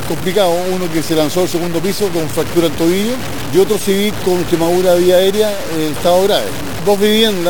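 Throughout, there's a grainy, signal-following grit, likely low bit depth without dither, truncated to about 4 bits, with error only around 15 dB below the sound.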